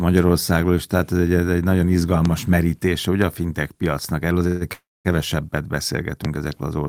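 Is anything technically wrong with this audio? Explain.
Yes, there are two kinds of fault. There's a loud pop at 2.25 s, right after "egy ez egy nagyon" and before "merítése ugye a fintech", and another at 6.25 s. Each is a single sharp click of about 20 ms, roughly 15 dB above the speech, which carries on underneath. That's likely a voltage spike from a switch, plug or static getting into the signal.

There are also two call audio freezes. The first, at 4.47 to 4.64 s just after "a fintech piacnak erről", stretches the last sound into a buzzy hold for about 135 ms. The second, at 4.73 to 5.08 s, holds for about 320 ms, with around 220 ms of that going silent. Speech then resumes where it left off with nothing lost, likely because delayed packets let the jitter buffer run dry.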